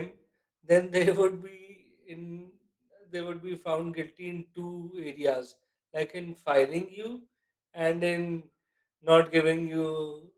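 Throughout the clip the speech sounds muffled, hoarse and slightly robotic. This is Opus voice compression in hybrid mode: a linear-prediction coder handles the lower band and a transform layer the range above 8 kHz, both coded coarsely at a rate that points to roughly 16 kbps.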